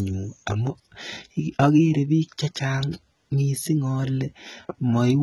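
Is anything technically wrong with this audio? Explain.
Yes. Throughout the speech, the treble sounds synthetic: sibilants come out gritty and lispy, and nothing is heard above about 11.8 kHz. This is likely HE-AAC compression at a very low rate, around 16 kbps, which codes only the lower spectrum and rebuilds the highs by copying lower bands upward under a coarse envelope, so the upper harmonics no longer line up.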